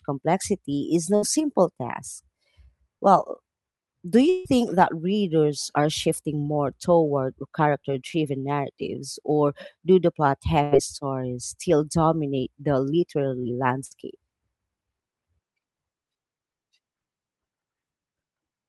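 From 4.29 to 4.47 s a long network dropout likely cut off the incoming stream, so about 160 ms of speech never arrived. The receiver stretched the last sound across the hole as a fading buzz or hiss, with no true silence, and speech resumes further on, missing that stretch.

Two bursts of packet loss follow. At 10.63 to 10.73 s, after "or do the plot", about 80 ms is lost and concealed by a decaying fill before "stories still dominate the". At 13.85 to 13.93 s, after "still dominate the literary", about 60 ms vanishes under a shorter fading fill.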